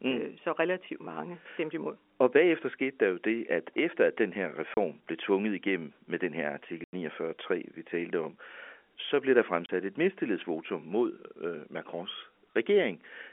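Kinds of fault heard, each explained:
Packet loss filled with silence: the receiver had nothing to play for some stretches of the stream and inserted digital silence instead, so the speech drops out abruptly with hard edges. Two short holes of 30 ms, one after "efter at den her" and one after "om så blev der", fit a single lost packet each, while a longer 90 ms gap after "igennem med den her" fits three consecutive packets on a 30 ms frame grid.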